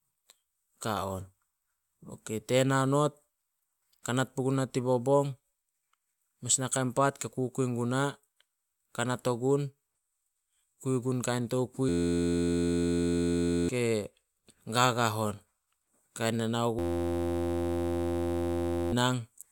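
A speech clip with two system hang loops. Just after "kui gun kain", from 11.89 to 13.69 s, and again from 16.79 to 18.92 s, an 11.61 ms slice repeats exactly, giving a steady 86.1 Hz buzz where about two seconds of speech should be. This fits a 512-sample buffer replayed while the system stalled. A spectrogram shows rigid harmonic lines spaced 86.1 Hz apart, and the waveform shows one identical cycle tiled end to end.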